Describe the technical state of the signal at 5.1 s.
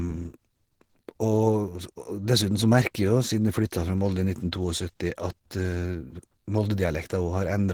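At 5.1 s the speech sounds hoarse and grainy, with a rough, noise-filled texture in the upper bands. Content still reaches about 20.3 kHz, so it is damaged rather than dull. The same damage runs through the entire clip. This is likely Opus compression at a low rate, which fits about 16 kbps in hybrid mode. With so few bits, the encoder models the lower band as speech and fills upper bands with approximated noise, which gives the rasp.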